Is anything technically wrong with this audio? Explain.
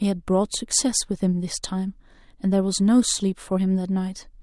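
No, there's nothing technically wrong here, so this bit of speech is fine just as it is.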